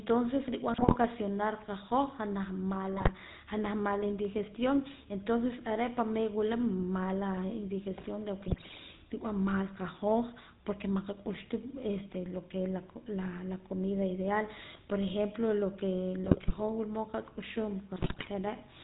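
From the start, the speech carries the coarse, buzzy grain of the GSM full-rate codec, which fits the 13 kbps full-rate coder. The voice is rebuilt from a vocal-tract filter driven by a thinned, regularly spaced pulse excitation, so it sounds gravelly, and the damage is plainly audible. On a spectrogram, energy stops at a hard ceiling near 4 kHz, and the harmonics look smeared and rough instead of clean.

GSM bit errors then break in five times: 0.74 to 0.97 s, 2.97 to 3.11 s, 8.48 to 8.79 s, 16.24 to 16.61 s and 17.96 to 18.29 s. In each burst, corrupted filter, pitch or gain values reach the decoder, and the voice turns into squawks, pops and gargling. The waveform shows sudden frame-length level jumps, and the spectrogram shows blotchy, displaced formant bands for a fraction of a second.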